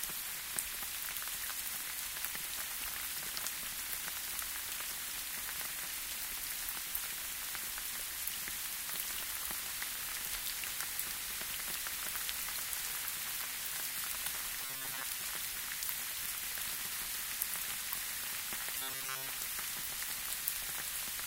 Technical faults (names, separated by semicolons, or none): robotic sound from repeated short buffers